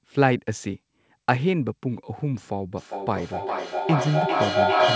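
It's a speech clip with a feedback howl from 2.75 s to the end: a tone around 700 Hz swells, repeating roughly every 0.4 s and peaking about 5 dB above the speech, from a mic-to-speaker loop gaining level each trip.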